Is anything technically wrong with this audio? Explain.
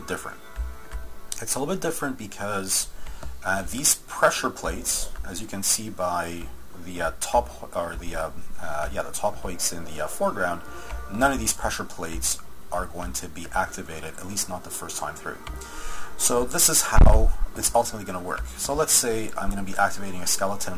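No, nothing technically wrong can be heard here.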